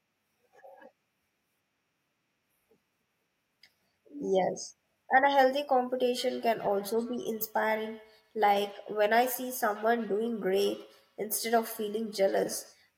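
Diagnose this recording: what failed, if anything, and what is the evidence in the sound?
This is feedback echo between two devices, a call-processing problem. From 6.2 s to 12.8 s the speech comes back at a steady interval of roughly 150 ms, peaking at about 19 dB below the speech. A second device in the room replays the audio into this microphone, and the echo canceller here can't remove sound it never played.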